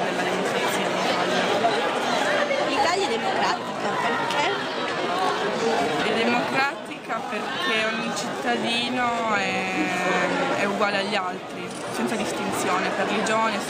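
From 3.47 to 9.73 s there is a time-stretched section. The pace drops abruptly to about 0.74 times normal while the pitch stays put. It drags. The likely cause is software lengthening the audio by repeating short pieces.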